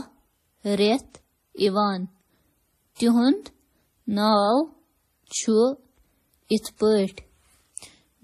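Throughout the speech, nothing sounds above 13.8 kHz, and two kinds of swirly, smeared grit overlap, likely from transcoding between lossy codecs: a low-bitrate MP3-style encode re-encoded as WMA.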